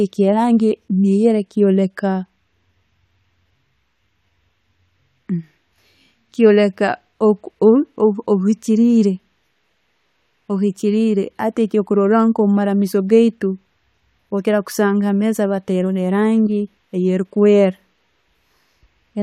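No technical faults can be heard at any point in the recording.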